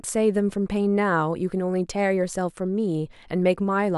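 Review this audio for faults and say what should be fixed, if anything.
No faults found; nothing needs fixing.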